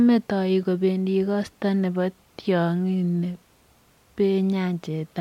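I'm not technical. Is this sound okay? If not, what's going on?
Yes, nothing wrong with it: no faults heard anywhere in the recording.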